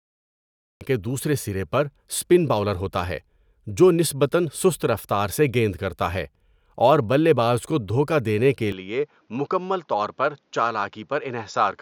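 The first 0.81 s are digital silence, then speech begins abruptly mid-sound: a cut-off start, where the waveform jumps from a flat line straight into the sound with no natural attack.

At 8.72 s the sound turns duller and about 5 dB quieter with no gap. This is likely an input switched to a poorer device: the spectrogram shows nothing above 7.2 kHz and a faint new noise floor.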